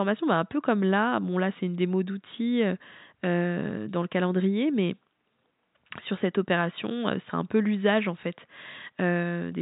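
Nothing stood out on listening to this speech, apart from a faint background of room noise sitting about 53 dB below the talker.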